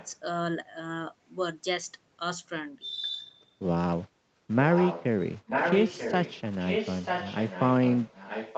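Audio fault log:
0.00–0.12 s, 4.70–5.05 s, 5.47–6.41 s, 6.58–8.58 s: echo leak. A delayed copy of the speech trails the original by about 0.94 s. It is faint at the start, clearer near 4.7 s, and almost as loud as the direct sound from 5.5 s onward. The likely cause is a loudspeaker end whose echo canceller failed to remove its own microphone pickup.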